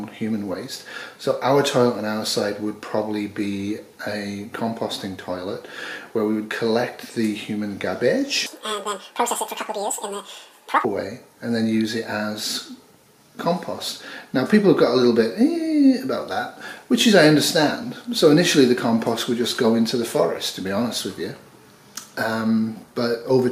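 From 8.46 to 10.85 s the audio is read two samples at a time, playing at double speed and an octave (12 semitones) higher, as sample pairs were taken as single frames.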